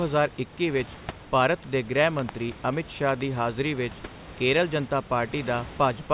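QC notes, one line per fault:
2.19–2.31 s and 3.09–3.23 s, loud pop: a voltage pulse, likely from a plug, switch or static, hits the line. Each gives a double pop about 10 dB above the speech, after "ਵਿੱਚ ਭਾਰਤ ਦੇ ਗ੍ਰਹਿ" and before "ਹਾਜ਼ਰੀ ਵਿੱਚ ਕੇਰਲ ਜਨਤਾ".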